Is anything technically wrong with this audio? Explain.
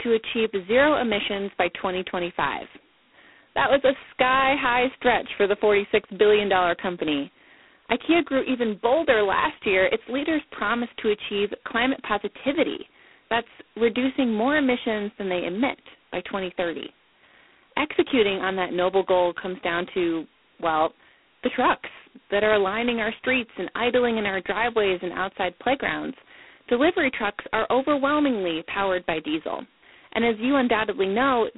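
Yes. G.726 ADPCM coding runs throughout: each sample is coded as a coarse difference from a prediction, which fits 16 kbit/s, leaving a harsh, rasping hiss that tracks the speech and nothing above 3.9 kHz.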